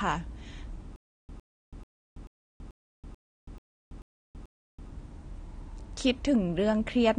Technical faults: AAC compression; stutter with silent gaps

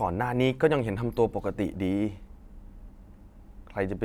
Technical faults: clock drift buffer slips

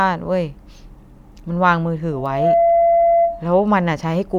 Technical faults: loudspeaker feedback squeal

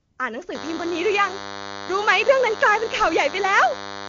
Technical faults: AMR comfort noise; DECT cordless phone buzz

